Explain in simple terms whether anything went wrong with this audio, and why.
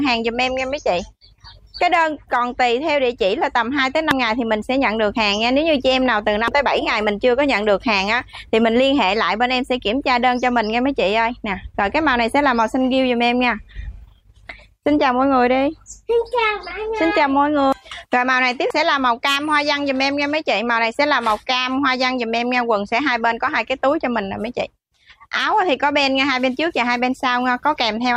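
Short blips at 4.11, 6.48 and 18.70 s come from damaged data in a compressed stream: the decoder hits corrupted bytes, loses its place and glitches briefly.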